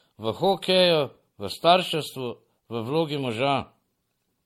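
Across the whole speech clip the sound is swirly and hollow, with a watery smear on sustained sounds, consonant attacks blurred, and nothing above 16.5 kHz. This is generation loss, likely from the audio being encoded about five times over with a lossy codec, consistent with MP3 at around 64 kbit/s. Each pass requantised the signal on a shifted frame grid, so noise and spectral holes built up beyond what a single encode would leave.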